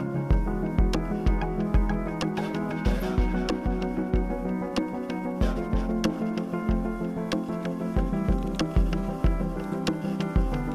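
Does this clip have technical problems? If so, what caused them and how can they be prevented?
No, nothing technical stands out here, so there's no problem to trace back or guard against.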